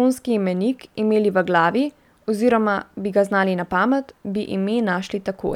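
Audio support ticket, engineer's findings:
No faults found in clip.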